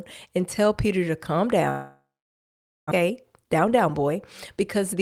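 A speech recording in which the audio likely suffered a long network dropout: from 1.69 s to 2.93 s, right after "to calm", nothing usable arrived. The receiver carried the last sound forward as a fading buzz, then left near-silence for roughly 0.85 s. About 0.8 s of speech is simply gone when the audio resumes, and the stream comes back with its delay shifted by around 0.4 s. A jitter buffer speed-up follows. The buffer is holding more audio than it wants, so the receiver trims short pitch-period slices again and again to catch up. From 3.01 s to 4.11 s the speech runs about 8% fast, and from 4.57 s to 5.02 s about 24% fast. Each stretch sheds roughly a tenth of a second. The pitch stays put, but the delivery sounds hurried.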